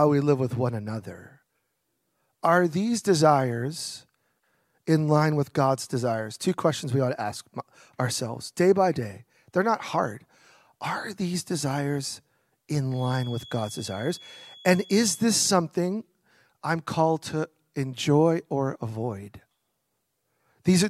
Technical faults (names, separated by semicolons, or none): feedback whistle